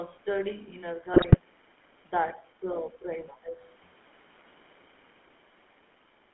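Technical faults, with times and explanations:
throughout, GSM full-rate codec. The speech has a buzzy, gravelly roughness. The codec rebuilds the voice from a vocal tract model fed by sparse regular pulses, so fine detail is lost. The band runs about 200 Hz to 3.4 kHz, which fits 13 kbps full rate.
0.11 to 6.34 s, clock slip clicks. A faint steady ticking runs through the whole clip, roughly every 40 ms, blurring toward a soft rattle. The likely cause is two unsynchronised clocks, about 500 ppm apart, forcing a single sample to be dropped or repeated at each slip.
1.14 to 1.37 s, GSM bit errors. The voice briefly breaks into squawks and gargling pops. Corrupted bits reached the decoder and distorted its filter, pitch and gain values. The damage sounds spread over roughly a dozen consecutive frames, each twisted in spectrum or level.
2.91 to 3.08 s, speech suppressed in double talk. The talker's voice dips sharply, by about 10 dB at its deepest, for a short moment. 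This is likely the echo canceller mistaking simultaneous talk for loudspeaker echo and turning everything down while both sides spoke.
3.28 to 3.38 s, other side's voice leaking through. A brief scrap of a second voice appears behind the talker, about 15 dB below the speech. The likely cause is loudspeaker playback reaching the microphone and not being fully removed by the echo canceller.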